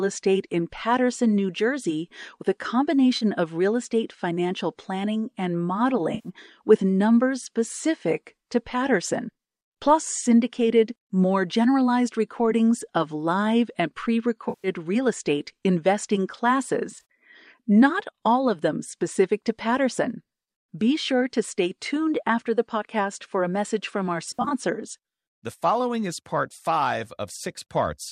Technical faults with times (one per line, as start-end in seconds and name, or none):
3.17-3.24 AAC frame loss with concealment
6.14-6.29 AAC frame loss with concealment
14.49-14.68 AAC frame loss with concealment
16.91-17.01 AAC frame loss with concealment
24.30-24.53 AAC frame loss with concealment